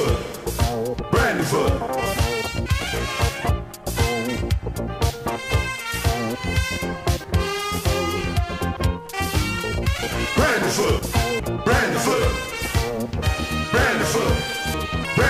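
Short glitches at 1.0, 8.77, 11.40 and 15.05 s come from damaged data in a compressed stream, where the decoder loses sync and skips to the next frame. Abrupt skips at 3.49, 7.24 and 14.74 s each drop about a third of a second, with the two sides butted together. These are likely audio missing between chunks, in line with a recorder working in roughly 4-second blocks.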